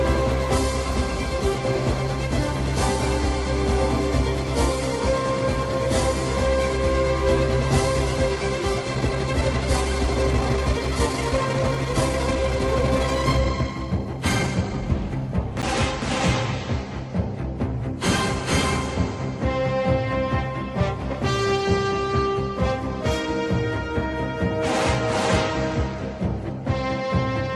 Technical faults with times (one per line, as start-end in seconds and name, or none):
8.90-14.90 time-stretched section
15.62 block of digital silence